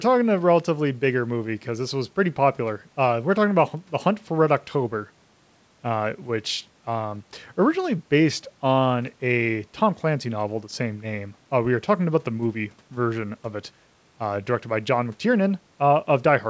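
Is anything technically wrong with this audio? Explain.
No, nothing is wrong: the speech is band-limited at 8 kHz with the low bass trimmed, which is expected from call microphone processing and a wideband call path of the G.722 kind.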